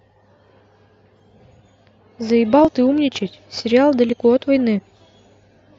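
A speech recording with clock drift buffer slips: about four regular clicks, every 1.45 s, from 1.20 s to 5.54 s. Two devices' clocks likely disagree by roughly a tenth of a percent, so a small sample block gets dropped or repeated. Spectrograms show thin vertical broadband lines; waveforms show small step discontinuities.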